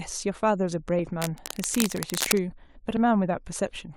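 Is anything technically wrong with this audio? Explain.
Yes, there's cable scratch noise running from about 1.21 to 2.42 s in this speech clip. For just over a second you get a dense, ragged rustling and scratching laid over the voice, and it's loud, sitting not far below the speech itself. The likely cause is a worn cable, connector or control being handled, so its contact resistance jumps around quickly and those jumps come through as uneven bursts of noise riding on the signal.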